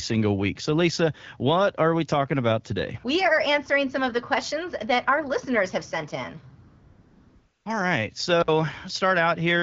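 At 6.67 s, right after "listeners have sent in", AMR comfort noise takes over for about 0.98 s, until 7.65 s. The phone judged the line silent and stopped sending speech frames, so the receiver generated a stand-in hiss from a rough level-and-spectrum sketch. The real room tone gives way to a smooth, even noise that switches on and off. On a spectrogram the band looks uniformly grainy with sharp vertical edges at both ends. The waveform shows a flat, featureless envelope.

From 8.41 to 8.48 s an intermittent contact opens the line for about 56 ms. A loose plug or cable briefly lost connection, so the sound drops out abruptly with crackle at each edge and only faint hiss during the gap. The waveform shows a near-empty stretch bracketed by sharp spikes. The spectrogram shows a short dark notch across all frequencies, with broadband vertical streaks at its borders. Across the clip, the light smoothing of the wideband AMR codec stays in the background, with the top band above 6.4 kHz filled with shaped noise.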